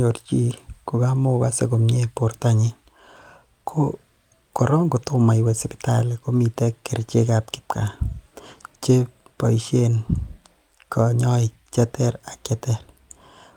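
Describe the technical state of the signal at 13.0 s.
At 13.0 s the speech signal is intact, with no audible fault at that moment.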